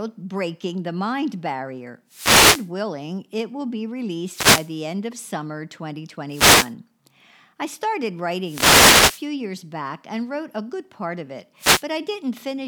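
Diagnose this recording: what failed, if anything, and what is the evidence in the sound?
The analogue radio link from the wireless microphone failed, producing five wireless microphone noise hits, heard as bursts of static at 2.08–2.70 s, 4.22–4.78 s (after "willing it will be", before "end of summer"), 6.29–6.74 s, 8.41–9.28 s (after "I started", before "years back and wrote") and 11.58–11.85 s (after "good part of it"). As reflections cancel the FM carrier, receiver noise rises over the speech. A spectrogram shows broadband hiss patches, and the waveform shows a thickened noise floor.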